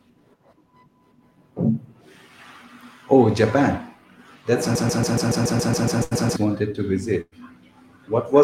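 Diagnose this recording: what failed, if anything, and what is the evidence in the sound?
A stalled player or stream buffer is the likely cause here, resending its last held fragment. From 4.75 to 6.36 s, a 140 ms piece repeats exactly, 11 times back to back, as a broken-record loop just before "wanted to". The sound that belonged there is gone.

Network delivery failed twice, with bursts of packet loss where consecutive packets never arrived in time. At 6.03 s, about 80 ms is missing, bridged by a 76 ms concealment that fades out. At 7.21 s, after "wanted to", about 100 ms is lost. The concealment stretches 106 ms and then drops into 30 ms of silence before the audio resumes further on.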